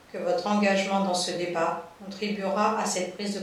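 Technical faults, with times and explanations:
No technical faults can be heard in the speech.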